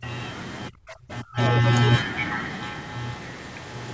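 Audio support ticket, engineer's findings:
Speech suppressed in double talk, 0.0–0.05 s and 0.69–1.38 s. Level drops sharply: roughly 20 dB in the brief opening dip, around 30 dB at deepest in the later span, where about half a second is affected. Likely cause: echo canceller unable to separate near-end talker from loudspeaker echo during overlap, attenuating both. Waveform: envelope pinched to near-flat stretches. Spectrogram: broadband energy dropping out in vertical holes, band already ending at 8 kHz.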